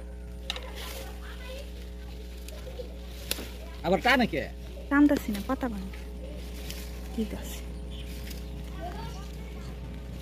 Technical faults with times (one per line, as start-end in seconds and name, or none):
0.00-10.22 mains hum